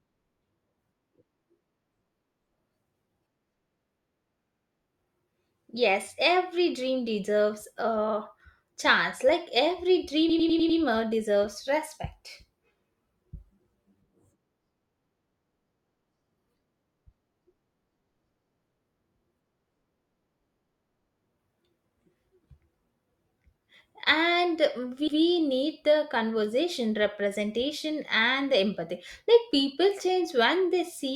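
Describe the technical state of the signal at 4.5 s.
At 4.5 s you're right in a spot of repeated frames, running from about 4.45 to 4.69 s. An 80 ms chunk of the speech gets played three extra times, so you hear a quick stutter, the same slice looping before the sound moves on. It's a stretch of compressed frames written or sent more than once, so the decoder replays it; 80 ms fits a run of four short codec frames. It adds 240 ms to the clip.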